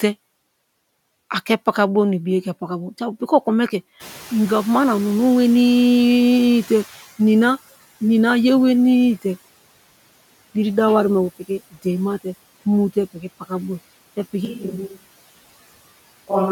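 At about 4.0 s the room noise jumps by 16 dB, and the noise suppressor is caught up: its estimate lags, so the noise passes with little reduction, then sinks by about 12 dB as it adapts over 3.12 s, settling near 7.11 s.

Between 11.39 and 11.86 s, and again between 13.13 and 13.51 s, the suppressor cuts speech it has mistaken for noise. In each span around 150 ms of the quieter parts of the speech is pulled down, by up to about 18 dB and about 15 dB respectively, leaving those sounds swallowed.

From 14.45 s to the end, the sound turns suddenly roomy and hollow, thinner in the bass, about 5 dB quieter, with background noise only around 25 dB below the speech. This likely reflects a switch to a distant microphone after the close one dropped out.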